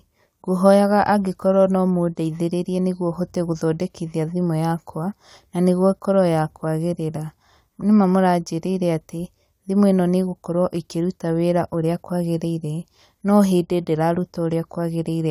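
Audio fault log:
Nothing in the speech stood out as a problem on listening.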